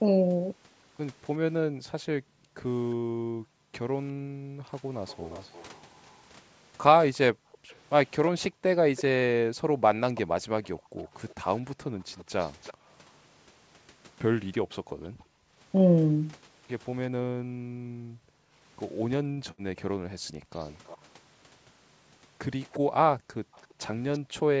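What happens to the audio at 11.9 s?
Echo leak, running from 5.07 s to 12.74 s, is still present at 11.9 s. A faint delayed copy of the speech trails the original by 333 ms, sitting well beneath it, roughly 25 dB down. This is likely a far-end echo canceller that failed to fully remove what its microphone picked up from a loudspeaker. The residue was sent back, so the talker's own speech returns a third of a second late as a quieter shadow.

Background gated by the echo canceller also spans this moment, from 7.33 s to 12.9 s. While the loudspeaker played, the canceller turned its microphone down hard to suppress echo, and the room sound sank with it, by as much as about 40 dB at the deepest point. These dips are not continuous, adding up to roughly a second and a half across the span. The background dips and comes back each time the canceller lets go.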